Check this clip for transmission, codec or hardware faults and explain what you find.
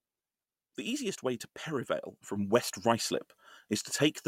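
One fault: a sudden gain jump. At 2.36 s the speech and the background noise step up together by about 6 dB and stay louder to the end. The likely cause is a digital gain change applied from one sample to the next with no ramp.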